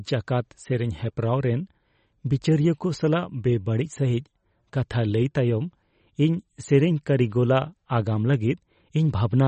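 Speech throughout, with plainly audible MP3 compression, likely from a low-bitrate encode, somewhere near 33 kbps judging by the sound. Nothing survives above 8.3 kHz, and the starved encoder's dropped frequency lines leave a watery, swirly texture with smeared consonant attacks.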